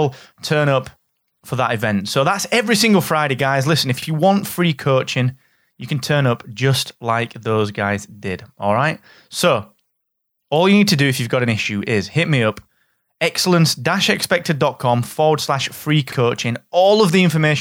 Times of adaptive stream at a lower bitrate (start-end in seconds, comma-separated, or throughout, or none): none